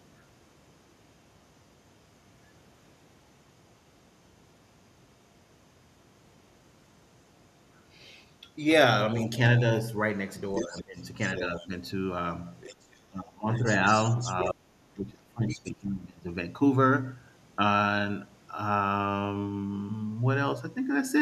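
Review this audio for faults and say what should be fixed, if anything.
The echo canceller likely left part of the loudspeaker signal in the microphone path, so the other side's voice leaking through is audible at 9.13–9.81, 10.55–11.68, 12.61–12.95, 13.53–14.51 and 15.48–15.69 s. It sits roughly 10 to 20 dB below the talker.

When both sides spoke at once, the canceller likely could not separate the talker from the echo and attenuated everything, so speech is suppressed in double talk at 10.65–11.71, 13.08–13.48 and 14.51–16.29 s. The talker dips by as much as roughly 25 dB.

A better-converged echo canceller with reliable double-talk detection, or a headset in place of the loudspeaker, would prevent both.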